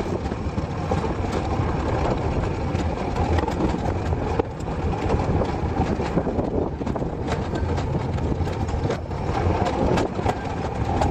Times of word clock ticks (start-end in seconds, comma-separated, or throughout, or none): none